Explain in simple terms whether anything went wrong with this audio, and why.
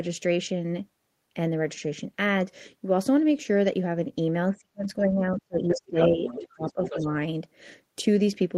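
Something did go wrong, and it happened when both ends of the call talked at once. The echo canceller, which strips the far side's voice out of this microphone, most likely couldn't tell the two voices apart, so it turned everything down. This is speech suppressed in double talk. From 4.51 to 5.96 s the talker's voice sinks to near silence for about one and a half seconds. A brief, lighter dip follows at 6.15 to 6.24 s, and another noticeable drop comes from 6.40 to 7.07 s.

The second problem is the other side's voice leaking through. The talker's loudspeaker was playing the far side, and the echo canceller likely failed to remove all of it before it reached the microphone. That second voice comes through almost as loud as the talker from 5.68 to 6.09 s. It is fainter from 6.27 to 6.48 s and a little louder again from 6.67 to 7.07 s, overlapping the last dip.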